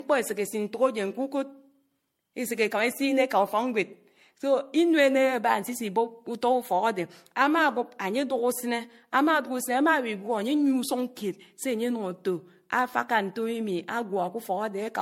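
Throughout the speech, the sound is swirly and smeared, with blurred attacks and nothing above 16.5 kHz. This is likely generation loss: repeated MP3 decoding and re-encoding, about four passes, each on a shifted frame grid, so quantisation noise builds up. The character fits a 64 kbit/s chain.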